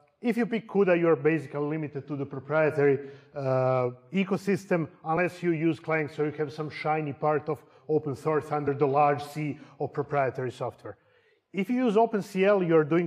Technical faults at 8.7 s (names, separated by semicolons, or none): compressed frames skipped